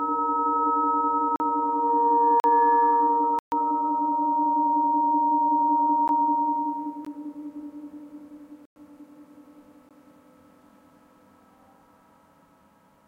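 The sound drops out in blocks of digital silence at 1.36 s and 2.4 s (40 ms each), 3.39 s (131 ms), 6.08 s, 7.05 s, 8.65 s (106 ms) and 9.89 s. The playback likely failed to fill its output buffer in time, so zeros went out. The shortest gaps come across as ticks and the longer ones as clear holes. Each edge is a hard step with no fade, unlike a concealed packet loss.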